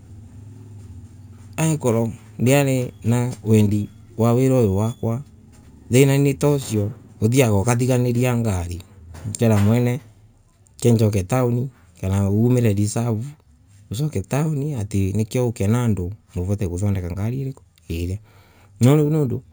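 Throughout the speech, imaging from sample-and-hold upsampling adds a bright metallic fizz between 8 and 16 kHz, about 23 dB below the voice. This fits 16 kHz audio raised to 48 kHz without smoothing. Unlike steady hiss, it tracks the speech's level and moves opposite its pitch.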